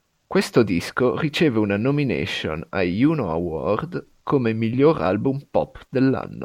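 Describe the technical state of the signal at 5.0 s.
At 5.0 s the speech signal is intact, with no audible technical fault at that point.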